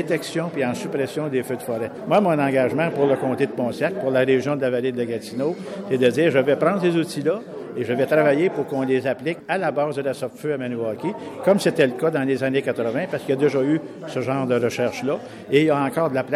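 No technical faults can be heard anywhere in this audio. There is nothing to point to in time and no repair to suggest.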